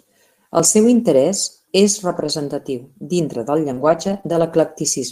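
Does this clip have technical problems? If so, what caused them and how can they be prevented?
Yes. Lost packets rebuilt from error correction occur at 2.07–2.29 s (after "seu interès és"), 3.77–4.19 s (after "dintre del") and 4.25–4.47 s. The decoder played low-bitrate copies carried in the following packets, so nothing drops out, but those stretches sound rougher and noisier. A more reliable network path with less packet loss would keep the decoder on the full-quality frames.

Short concealed packet loss occurs at 3.73–3.79 s (after "dintre del") and 4.21–4.25 s. The receiver stretched the preceding sound across holes of about 40 ms and 20 ms, leaving a brief smear. A steadier connection and a larger jitter buffer would let these late packets arrive in time to be played.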